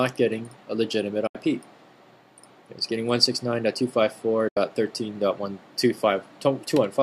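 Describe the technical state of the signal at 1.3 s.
A digital broadcast dropout runs from 1.27 to 1.35 s. The receiver stopped getting valid frames and muted, so the sound fades out over about 8 ms and leaves a 72 ms hole, which fits roughly three lost frames, before the signal returns.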